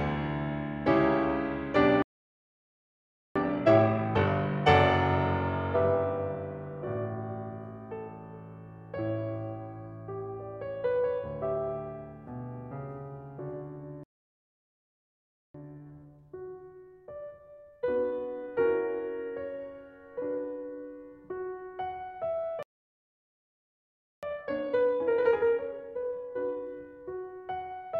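A piece of music that hits three playback stalls: the sound cuts out mid-flow from 2.02 to 3.36 s, 14.04 to 15.54 s and 22.63 to 24.23 s, gaps of about 1.3 to 1.6 s, likely the player starving for data or its thread getting blocked. Each gap is followed by time-compressed catch-up, where the player trims its backlog by slicing out and cross-fading small pieces. The music comes back hurried but at normal pitch: 2× from 3.36 to 4.68 s, 1.1× from 15.54 to 18.54 s and 1.5× from 24.23 to 27.23 s.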